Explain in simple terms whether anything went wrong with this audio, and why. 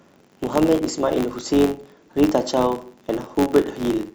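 A buzz runs under the speech from start to finish. The cause is a filter restarted on every block. It forgets its state each time, so every chunk begins with a tiny click. The clicks repeat 93.8 times a second, fitting a 512-sample buffer, and grow louder with the speech.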